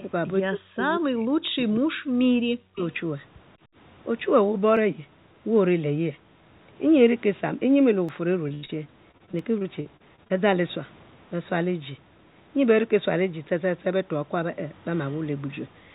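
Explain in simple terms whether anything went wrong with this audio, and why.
Several things went wrong in this speech recording.

Echo leak: A faint, delayed copy of the speech, trailing by about 0.19 s, appears at 0.0 s, 2.77 to 2.97 s and 15.11 to 15.19 s. It is likely leftover loudspeaker sound the echo canceller missed.

Speech suppressed in double talk: From 0.48 to 1.82 s and 2.41 to 2.82 s, the speech sinks almost to silence in pieces. This is likely the echo canceller muting the talker while the other side spoke.

Dropped buffer (overrun): Brief skips occur at 4.77 s, 8.09 s and 9.39 s. Each likely marks a few milliseconds of audio lost when the program fell behind.

Repeated packet loss (robotic sound): From 8.49 to 10.32 s, the speech turns choppy with pieces missing. Fifteen gaps, the longest 86 ms, were patched by stretching the previous sound.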